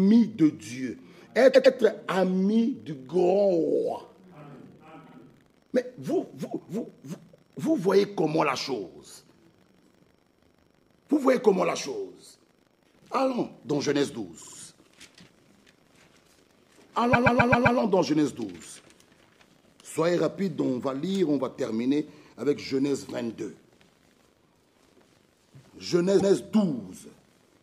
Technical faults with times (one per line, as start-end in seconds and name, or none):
1.53-1.74 repeated frames
5.06-5.16 repeated frames
14.41-14.56 repeated frames
17.12-17.78 repeated frames
26.19-26.35 repeated frames